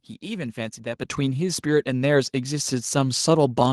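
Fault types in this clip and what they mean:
Microphone volume stepped up: at 1.02 s the input gain on the capture device is raised in a single step of about 6 dB, so the speech and the room background jump louder together and stay at the new level for the rest of the clip.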